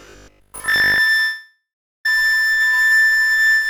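A short clip of everyday sound, and it starts badly: from 0.02 to 1.0 s there's robotic sound from repeated short buffers. Most of the audio in that stretch is the same tiny chunk played over and over, which stamps a rigid 50 Hz buzz onto it, so the likely cause is playback starving and looping roughly 20 ms buffers. Then at 1.2 s there's a long network dropout lasting to about 2.06 s. The receiver stretches the last sound into a fading buzz or hiss, then goes silent for about 400 ms, and about 500 ms of real audio never comes back. That fits a sudden jump of a few hundred milliseconds in network delay.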